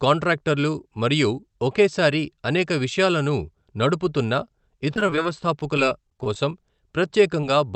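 Repeated packet loss (robotic sound) runs from 4.91 to 5.24 s and again from 5.59 to 6.64 s. Audio kept arriving late or not at all, so the receiver repeatedly stretched the last sound over each hole, seven times in the first stretch and ten in the second, none longer than 19 ms. The speech turns choppy and mechanical, with fragments missing. About a quarter of the first stretch is patched, and about a tenth of the second.

Short concealed packet loss follows at 7.08–7.10 s, 7.41–7.43 s and 7.71–7.73 s. Each time, about 10 ms of the call failed to reach the decoder, and the gap was bridged with a continuation of the preceding sound before blending back. Each one is a brief smear or wobble. The call path's Opus coding caps the audio near 8 kHz and runs at around 40 kbps.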